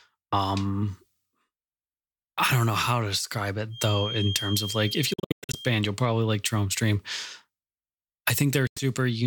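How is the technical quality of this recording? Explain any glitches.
The recording has two kinds of glitch: a thin whistle and two short gaps in the speech.

A feedback whistle runs from 3.69 to 5.85 s, starting after "know how to describe" and lasting until "you'll probably like". It is a thin 3.2 kHz tone sitting well below the speech. It is likely a loudspeaker-to-microphone loop held right at the edge of feedback.

A Bluetooth dropout breaks up the audio from 5.13 to 5.57 s, with about 305 ms silenced in pieces and the longest gap 107 ms. A second dropout removes 91 ms at 8.67 to 8.81 s. The cause is likely late packets on the wireless link: the sound resumes skipped ahead, as if it had kept playing.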